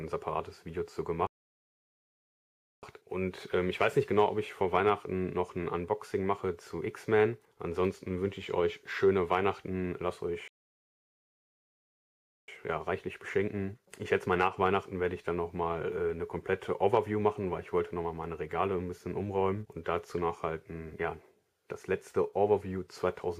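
At 1.27 s the sound halts mid-flow and stays silent until 2.83 s, about 1.56 s, then again from 10.48 to 12.48 s, a full 2.0 s. These are playback stalls, likely the player starving for data. Unlike a brief dropout, each gap is long and completely silent.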